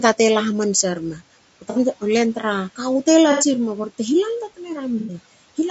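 Throughout, the speech sounds rough and grainy, with noise between the harmonics and a thin, synthetic top band. This is likely low-delay AAC compression, AAC-ELD at a low bitrate, around 32 kbps. Short frames resolve pitch poorly. The damage is plainly audible.

Three brief smeared, noisy patches follow. These are AAC frame loss with concealment. The first runs from 1.70 to 1.79 s, just before "len tru", and lasts 60 ms. The second, from 3.32 to 3.46 s after "te la", lasts 90 ms. So does the third, from 5.00 to 5.14 s after "lalta tne". Each time, the decoder patched the gap from the last good spectrum. Room noise sits about 23 dB below the speech.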